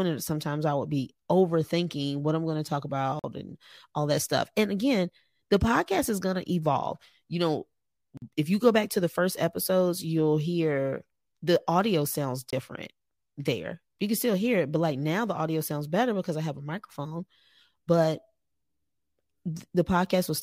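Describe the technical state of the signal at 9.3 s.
A block of digital silence falls at 9.32 s, lasting about 5 ms, between "go back to the" and "episodes you'll hear the". The output drops to silence and returns abruptly. Unfilled buffers or invalid calculated values cause this. Being so short, it sounds like a tick or dip.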